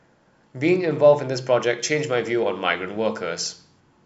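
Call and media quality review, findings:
Pre-emphasis left on, 1.80–3.80 s. Speech turns thin, bright, sibilant; treble up about 8 dB at 10 kHz relative to 1 kHz. Treble boost applied upstream, matching de-emphasis cut never applied. Shape fits CD-style 50/15 µs emphasis curve. Suspect playback or decode stage ignoring emphasis flag.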